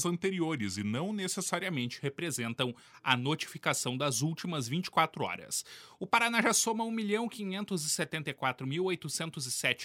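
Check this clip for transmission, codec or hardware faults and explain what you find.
One fault is present, confined to the opening of the clip.

Wrong sample rate, 0.00 to 1.63 s: the samples are clocked out slower than they were captured, with no conversion, which fits 48 kHz material played at 44.1 kHz. Speed and pitch drop together, to 0.919 times normal speed and about 1.5 semitones lower, so the sound comes across as slightly slowed and lowered.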